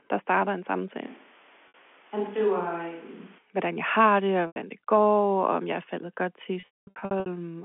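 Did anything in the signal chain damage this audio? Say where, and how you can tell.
Yes. From 1.07 to 3.38 s, after "der starter en" and until "hvordan jeg har det", the speech turns roomy and hollow, thinner in the bass, about 5 dB quieter, with room noise about 25 dB below it. This is likely a switch to a distant microphone at the capture stage, with the close mic's feed dropped and then restored abruptly.

Packet loss with pitch repetition occurs in the network stage. At 1.68 s (60 ms) and 4.47 s (90 ms, between "jeg har det og" and "det går og") the voice briefly holds a buzzy repeated pitch period. After "faldet godt til", from 6.6 to 7.26 s, about 450 ms is lost in scattered gaps. The longest run is 210 ms, where the concealment fades out before speech cross-fades back. All of this sits on a clean 250–3400 Hz G.711 telephone band.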